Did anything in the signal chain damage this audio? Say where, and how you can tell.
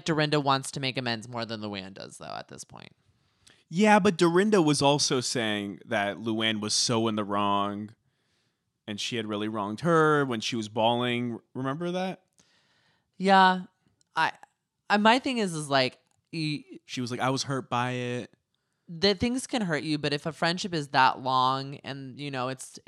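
No, nothing in this speech recording stood out on listening as damage from any stage of the signal chain.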